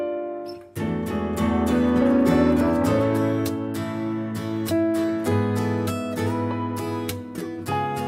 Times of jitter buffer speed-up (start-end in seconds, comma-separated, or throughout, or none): none